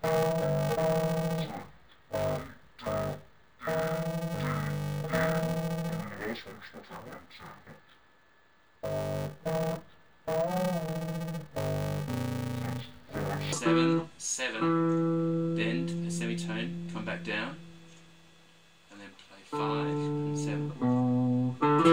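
From 0.0 to 13.53 s, interleaved audio read as planar splits each short block into half-speed channel copies, giving a dull, robotic buzz near 345 Hz, consistent with 128-sample blocks.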